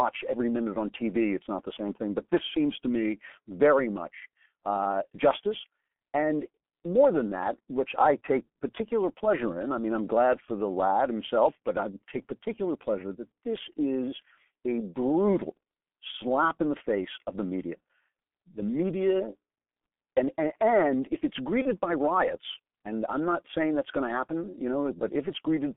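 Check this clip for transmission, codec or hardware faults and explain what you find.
Two faults are present: heavy low-bitrate codec damage and one brief packet-loss dropout.

Throughout, the G.723.1 codec at about 6.3 kbit/s confines the speech to roughly 200 Hz–3.5 kHz, making it muffled and hoarse; the spectrogram shows a hard ceiling near 3.5 kHz.

From 21.62 to 21.71 s, between "and and if it's" and "by riots and I'm", VoIP packet loss concealed by the speech codec fills about 30 ms, fitting one lost frame. The decoder extrapolates a fading buzzy tone or coloured noise, seen as a decaying envelope.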